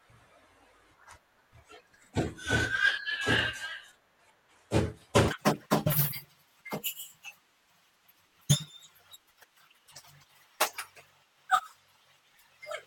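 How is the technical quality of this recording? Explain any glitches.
The recording has one clear problem: a section at the wrong speed. From 5.28 s to the end, the speech runs 1.87 times too fast. Pitch rises about ten semitones with it. Voices sound high and rushed. This is likely a playback or edit clock mismatch.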